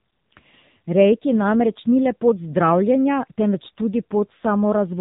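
From start to finish the speech carries the sound of the AMR narrowband mobile codec, heavily damaged. Nothing survives above 3.8 kHz, but unlike a plain low-pass filter, the voice here sounds buzzy and synthetic, because it is rebuilt from a vocal-tract model driven by sparse pulses rather than simply dulled. That heavy coarseness points to one of the low AMR-NB modes, around 6.7 kbps, starving each 20 ms frame of bits.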